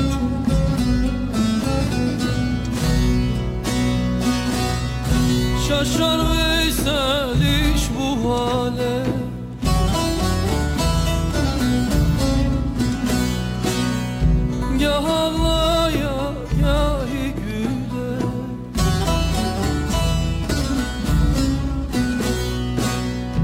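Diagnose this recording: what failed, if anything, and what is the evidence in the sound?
A crude rate conversion failed at the sample-format conversion stage. Samples were dropped to the nearest output position instead of passing through a proper resampling filter, which fits a 48 kHz to 44.1 kHz change. The repeating timing error produces shifted, inharmonic copies of the material, about 25 dB below the signal. These tones are heard throughout the clip as a gritty buzz or fizz that rises and falls with the loud and high-frequency passages.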